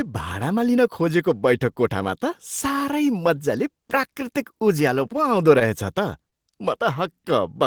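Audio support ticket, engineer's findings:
Short stall from a late packet, 5.59–5.63 s. Sound held about 16 ms with slight buzz or dip, then resumes where it left off. Jitter buffer ran dry and stretched the last audio. Nothing lost, only added delay (16 ms), unlike concealed loss.

Short concealed packet loss, 6.30–6.34 s. Brief smear or wobble where about 20 ms of speech never arrived. Decoder concealment filled roughly 17 ms from the preceding sound. Distinct from a stall: audio is actually missing, no added delay.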